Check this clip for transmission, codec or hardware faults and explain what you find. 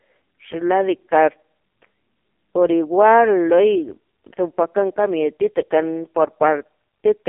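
One fault runs through the whole clip: AMR narrowband mobile codec coding. The speech went through an AMR-NB mobile codec, and the heavy damage points to a low mode, around 5.15 kbps. With so few pulses per frame, the vocal-tract model sounds buzzy and synthetic, squeezed into a 250 Hz to 3.5 kHz line band with nothing above 3.5 kHz.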